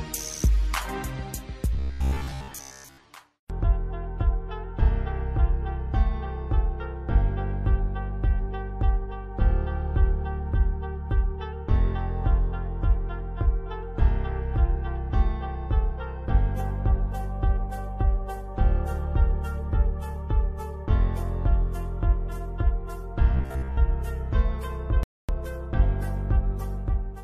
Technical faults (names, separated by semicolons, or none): robotic sound from repeated short buffers; rebuffering stall